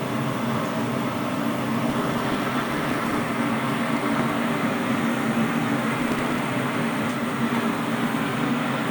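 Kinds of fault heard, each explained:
Processor overload crackle: the processor kept missing deadlines on very short, sub-millisecond buffers and skipped them, so gritty crackle tears through the sound at 1.84–3.28 s and 6.0–6.39 s.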